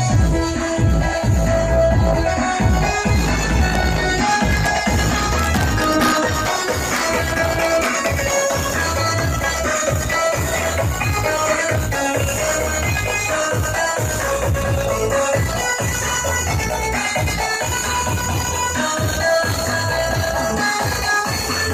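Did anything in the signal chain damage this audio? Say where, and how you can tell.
No, nothing along the chain seems to have harmed this audio, and there's nothing in it that points to trouble at any stage.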